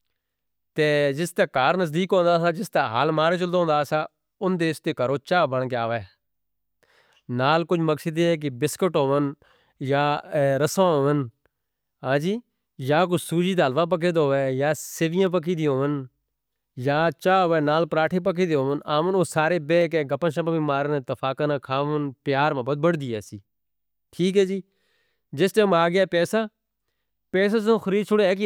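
Two sharp clicks cut through the speech, one at 15.27 s and another at 19.82 s. Each is a single tick, over instantly, showing up as a thin vertical line across the spectrum. They're most likely dropped samples: a tiny fraction of a millisecond goes missing from the stream, so the waveform jumps straight to a later value. The gap is far too short to take any sound out, but that sudden step is what you hear as the click.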